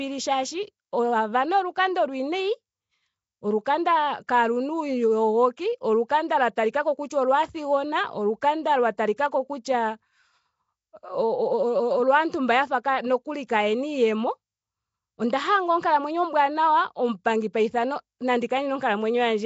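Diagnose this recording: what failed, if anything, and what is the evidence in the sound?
The codec stage points to Nellymoser compression, likely at about 32 kbps. Starved bands are noise-filled, giving the speech a rough, hissy, underwater halo with nothing above 7.7 kHz.

The same transform codec causes pre-echo at 4.27 s and 9.16 s. Quantisation noise spread across each block puts a brief hiss, about 16 to 17 ms, before sharp attacks and softens them.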